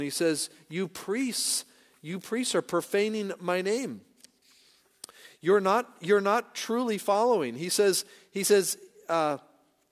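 Listening to the speech in this clip, nothing stood out as a technical problem at any point.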